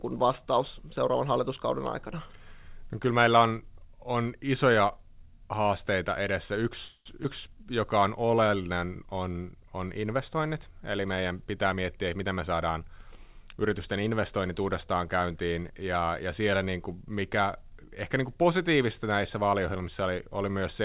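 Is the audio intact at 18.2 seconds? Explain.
Yes, at 18.2 seconds the speech is intact, with no dropout, glitch or other fault, only the narrow telephone-band sound of the call path, which carries nothing above 4 kHz.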